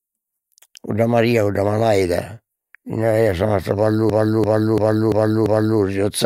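At 4.10 s, just after "sa mastra", a system hang loop begins and runs to 5.80 s. The system stalled while the hardware kept replaying its buffer. A 341 ms slice repeats five times, near 2.9 per second, as a stutter. That fits a 16384-sample buffer.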